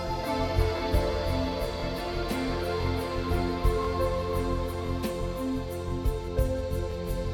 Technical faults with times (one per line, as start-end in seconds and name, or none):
0.78-0.80 overlapping chunks
1.80-1.82 overlapping chunks
2.82-2.85 overlapping chunks
3.85-3.87 overlapping chunks
4.87-4.89 overlapping chunks
5.89-5.92 overlapping chunks
6.92-6.94 overlapping chunks